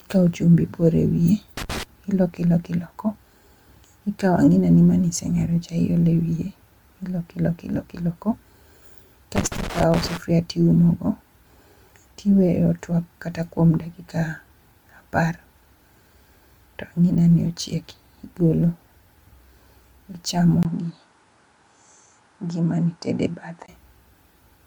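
Throughout the speech there is a swirly, hollow smearing, and consonant attacks sound blurred. That is more damage than a single MP3 pass at 128 kbit/s would leave, so the likely cause is generation loss: the audio has been re-encoded about seven times. Each pass quantised on a shifted frame grid, so the holes and noise piled up. The top end still reaches 20.2 kHz, which separates this from a low-bitrate encode, where the top end would be cut off early.

From 1.57 to 1.83 s, and again from 9.36 to 10.17 s, there are irregular bursts of scratchy crackle. This is loose connector crackle: a worn or dirty contact rapidly breaking and remaking, so the signal is chopped into fragments. Its ragged, uneven texture is what separates it from digital dropouts, which leave clean gaps, and from steady clipping distortion.

At 20.63 s there is a 20 ms silence. After it the sound turns dull and boxy, with nothing above 10.7 kHz. 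It is also about 5 dB quieter, and a new noise floor sits about 45 dB below the signal. At 23.68 s the sound clears again. The likely cause is an input switched to a poorer device, a narrower-band microphone or headset profile. The silent gap and the changes in tone, level and noise all happen together, and that marks this as a change of device rather than an equaliser or filter.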